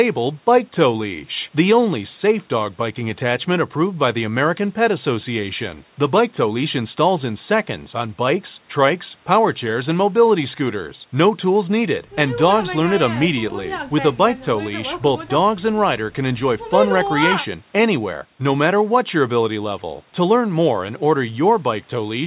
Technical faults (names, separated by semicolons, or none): none